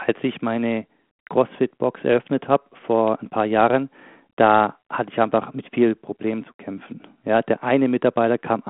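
No technical faults can be heard in this recording.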